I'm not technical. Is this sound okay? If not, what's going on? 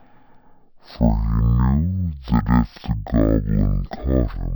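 No. The problem is stereo read as mono, and it lasts through the whole clip. A stereo recording stores its left and right sides as alternating tiny slices. Here the player took those alternating slices as one continuous stream, so each moment of sound is stretched to twice its length. The speech plays at half speed and sounds an octave lower than it should, giving that slow, deep, dragged quality.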